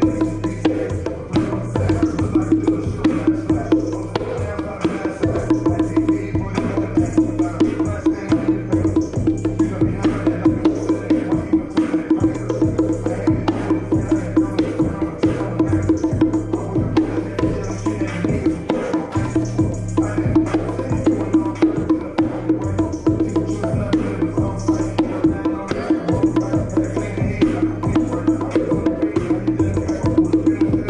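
A single sharp click at 11.95 s is likely dropped samples: a couple of samples go missing, so the waveform jumps abruptly to a later value.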